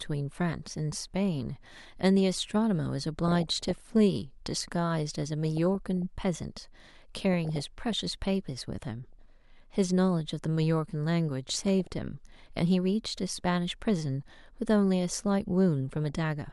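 Weak DAB reception lets bit errors slip past error correction into the MP2 data of this speech clip. Corrupted samples put short noise blips in sub-bands and corrupted scale factors make sub-bands jump in level, causing DAB burbling at 3.24–3.89, 5.32–6.02, 7.33–7.93, 9.13–9.30, 11.49–11.91 and 15.96–16.10 s, worst in the first burst.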